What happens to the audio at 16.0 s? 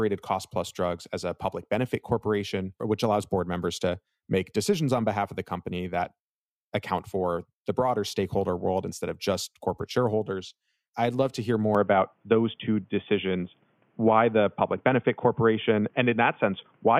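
Speech sounds boxy at 16.0 s, with nothing above 3.5 kHz and a faint new noise floor. The input likely switched to a poorer device from 11.75 s, just after "I'd love to hear".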